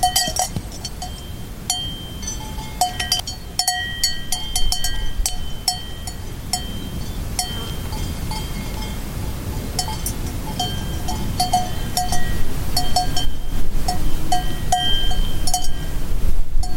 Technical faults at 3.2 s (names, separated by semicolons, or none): damaged data in a compressed stream